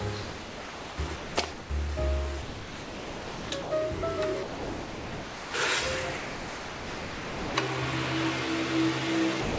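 Sound dropped by the voice detector, most likely, cuts the audio out eight times: 0.23–0.98 s, 1.16–1.37 s, 1.52–1.70 s, 2.42–3.50 s, 3.62–3.71 s, 4.43–5.54 s, 6.17–7.55 s and 9.41 s to the end. Each gap is filled with smooth, steady comfort noise rather than the stutters, repeats or metallic smearing of packet loss concealment. The sound returns when the detector triggers again. Nothing comes through above 8 kHz, which fits a wideband call path.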